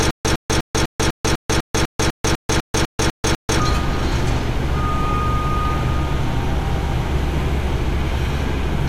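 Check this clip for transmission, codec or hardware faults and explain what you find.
One transmission fault is present.

Stutter with silent gaps, from the very start to 3.6 s: a 107 ms burst repeats every 249 ms with 143 ms of dead silence between, fourteen times. The player likely stalled, replaying its last fragment at each retry and then running dry, so the sound meant for that stretch is lost.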